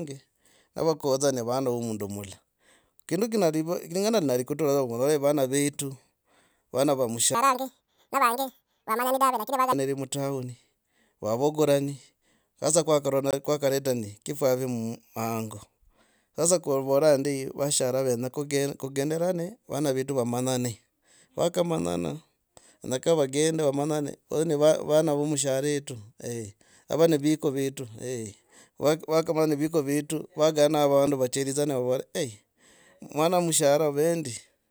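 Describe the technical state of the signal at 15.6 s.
At 15.6 s the speech signal is intact, with no audible fault at that point.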